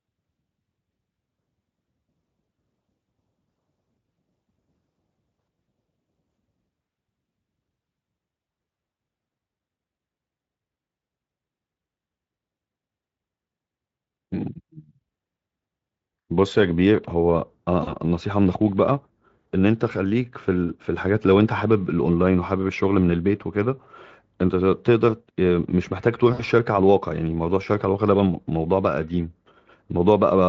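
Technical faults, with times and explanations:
17.83–17.96 s and 26.33–26.43 s, VoIP packet loss concealed by the speech codec: the Speex decoder stretches the last sound over about 40 ms, then 60 ms, into a fading buzz or coloured noise, leaving it weak briefly afterwards.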